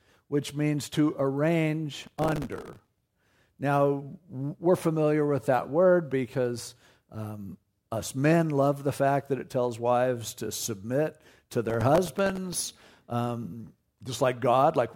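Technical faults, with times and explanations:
1.94 to 3.02 s and 11.65 to 12.82 s, processor overload crackle: the processor kept missing its deadlines on very short buffers, likely around 1.5 ms. Dozens of slots got stale audio with hard edges, so a gritty tearing rides over the speech until the load eases.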